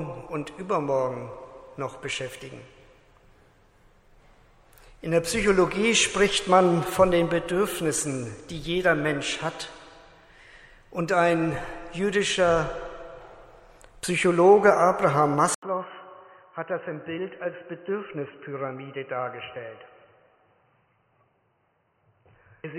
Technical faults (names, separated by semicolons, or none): input switched to a poorer device